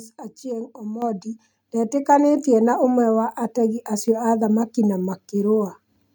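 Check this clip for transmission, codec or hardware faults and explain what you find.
One fault stands out: a microphone volume stepped up at 1.02 s. The call software judged the microphone input too quiet and raised the device's input volume in a single jump of about 8 dB, rather than easing it up gradually. Because the change happens at the hardware input, the speech and the background noise both get louder at the same instant. The result is an abrupt level step, with the room sound lifting along with it.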